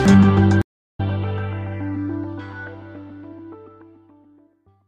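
At 0.62 s the audio cuts to silence, a stream reconnect. The connection dropped, the player stopped output, then reconnected and started a new decoder partway through the stream. The gap lasts about 0.37 s, ending at 1.00 s. When sound returns it does not pick up where it stopped but jumps ahead by roughly 0.4 s, so that stretch of the audio is missing entirely rather than merely delayed.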